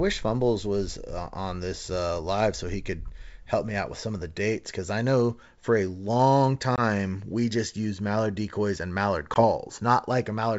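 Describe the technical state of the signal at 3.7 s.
At 3.7 s the speech is intact, carried on G.722 wideband telephone coding at 64 kbit/s with no fault audible at that moment.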